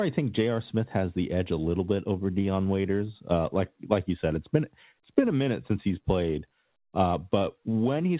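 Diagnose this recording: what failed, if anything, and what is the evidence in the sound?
Nothing in the recording has failed. It sounds like speech carried over a working call path, with no content above about 4 kHz, which fits a telephone-band codec such as G.711 A-law at 64 kbps.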